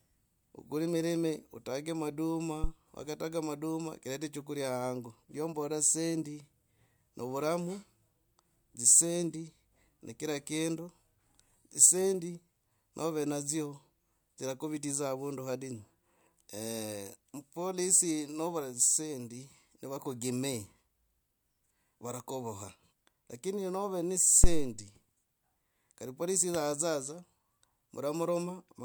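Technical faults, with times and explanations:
2.64 to 2.72 s: phantom power thump. A supply switching on or off on the live input sends a step through the coupling capacitors. It is a deep thump that dies away in about 18 ms.
24.44 to 24.74 s: phantom power thump. The same kind of supply switching causes a deep low thump, this time with a longer decay of about 67 ms.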